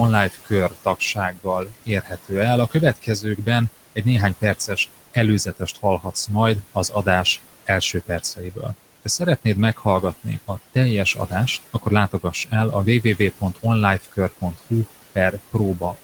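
Noise suppressor artifacts run through the whole recording. The suppressor estimates the steady room noise, which sits about 18 dB below the speech, and pulls the bands it judges to be noise down by about 16 dB frame by frame. The background drops away in the gaps and swells back under the speech. On a spectrogram the noise floor looks mottled and patchy between phrases rather than an even haze.

Speech cut by the noise suppressor appears from 0.3 to 12.52 s. Soft consonants and trailing syllables are mistaken for noise and lowered by up to about 19 dB, roughly two seconds in all, so they sound swallowed or faint. It happens again from 13.17 s to the end at 16.03 s, with drops of up to about 16 dB. In the waveform, word edges taper abruptly, and on the spectrogram faint high-frequency consonant energy is missing or blotchy.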